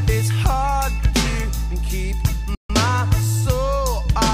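The audio cuts out abruptly at 2.55 s and stays silent until 2.70 s, a gap of about 145 ms that breaks the sound in mid-flow before it picks up again. This is a playback stall, most likely caused by the player running short of buffered data or having its output thread held up, so nothing reached the output until it recovered and carried on.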